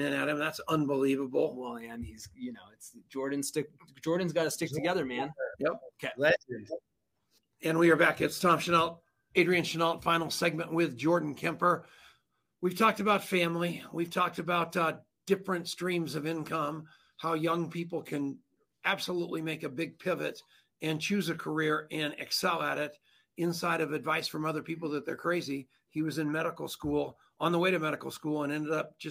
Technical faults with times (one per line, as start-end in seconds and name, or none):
none